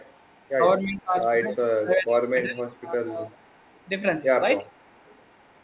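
From 0.0 to 0.5 s a faint, delayed copy of the speech trails about 339 ms behind, roughly 30 dB below it. It returns at 0.84 to 1.02 s, 3.29 to 3.89 s and 4.71 s to the end, about 35 dB down. This is an echo leak, likely loudspeaker pickup that the far end's echo canceller failed to remove.

From 0.88 to 1.15 s the speech sinks by up to about 20 dB. From 1.56 to 3.31 s it drops by up to about 25 dB, in pieces. A brief dip of about 5 dB follows at 4.59 to 4.66 s. This is speech suppressed in double talk, likely the canceller turning the talker down along with the overlapping echo.

Throughout, nothing sounds above 4 kHz, the normal limit of the G.711 call path.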